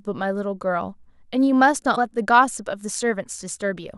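A brief glitch from 1.92 to 1.98 s in the speech: damaged data in a compressed stream, where corrupted frames made the decoder lose sync and resynchronise.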